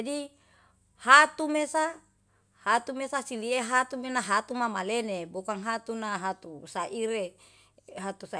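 A speech recording, and nothing technically wrong can be heard in it. There is no event to place in time and no cause to trace.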